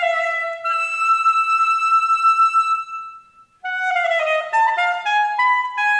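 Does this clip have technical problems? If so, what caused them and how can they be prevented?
No, the signal shows no technical faults, with nothing in the recording or transmission chain leaving an audible mark on it.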